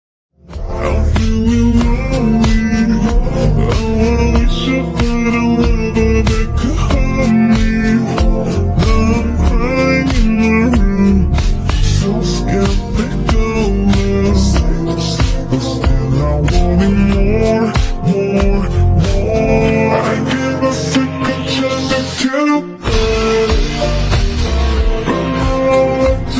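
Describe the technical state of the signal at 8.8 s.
At 8.8 s the signal is intact, with no dropout, distortion, glitch or other technical fault at that point.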